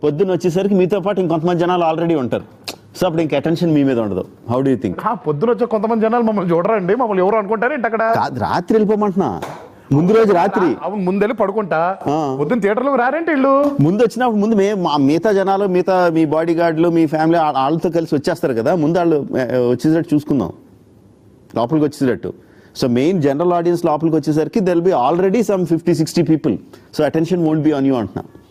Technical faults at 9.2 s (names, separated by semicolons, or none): gain pumping